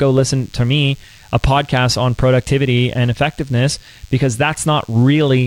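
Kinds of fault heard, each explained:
DECT cordless phone buzz: rectified 10 ms radio bursts give a thin, faint 100 Hz buzz throughout, drawn as steady harmonic lines 100 Hz apart on a spectrogram.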